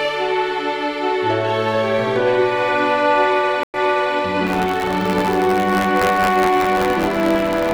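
At 3.63 s the audio drops out for 105 ms in a stream reconnect. The connection broke, the player fell silent, then reconnected and started a fresh decoder partway through the stream. When sound returns it picks up 420 ms earlier than where it stopped, so a short stretch is heard twice, consistent with the server resending a burst on reconnection. The disturbance, including the muted or faded restart, settles by 4.16 s.

From 4.46 s to the end, buffer tearing sets in. The process writing the ring buffer and the hardware reading it have slipped relative to each other, so their positions cross inside every period. In each buffer, a small slice holds audio from roughly 20 ms earlier, with hard joins on both sides. The repeated splices give a steady robotic buzz at 93.8 Hz, which fits a 512-sample buffer, and it is audible only while signal is present.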